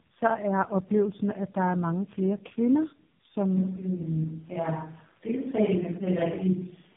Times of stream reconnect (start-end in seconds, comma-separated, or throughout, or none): none